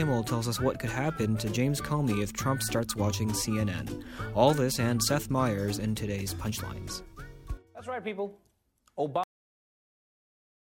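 A cut-off end arrives at 9.24 s, where the sound stops abruptly mid-event instead of fading. The final buffers were never written out or played back, so there is no natural decay, just an instant drop to digital silence lasting about 1.5 s.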